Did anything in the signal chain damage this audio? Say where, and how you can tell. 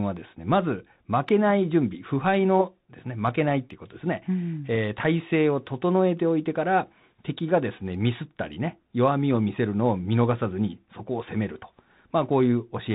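Yes, at the codec stage: a Bluetooth CVSD headset codec throughout, with nothing above 4 kHz, scratchy s sounds and grainy hiss, which fits 64 kbps one-bit delta modulation.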